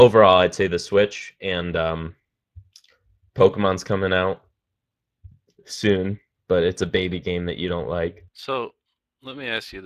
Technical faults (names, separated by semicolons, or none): Speex codec